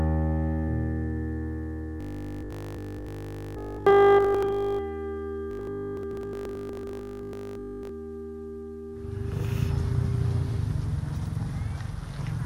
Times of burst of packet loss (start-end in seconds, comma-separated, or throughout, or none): none